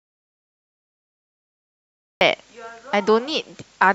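From the very start until 2.21 s the recording holds an audio dropout to silence: no speech and no room tone, just silence, already under way when the clip begins. The speech then enters abruptly mid-flow rather than with a natural onset. The likely cause is a lost input, such as a disconnected device, a failed link or a mute, while the recorder kept writing silence. Anything spoken during that stretch is unrecoverable.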